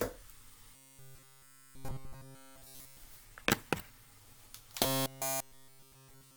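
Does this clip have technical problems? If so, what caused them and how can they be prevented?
Yes. From 0.76 to 2.97 s and again from 4.84 s to the end, the sound collapses into a rigid, metallic buzz fixed at 134 Hz that follows the original only roughly. This is robotic sound from repeated short buffers, likely caused by audio arriving too seldom so that playback kept looping the last 7.5 ms or so, a period that sets the 134 Hz pitch. Preventing it means giving the audio path enough buffering and processing headroom that fresh data always arrives in time.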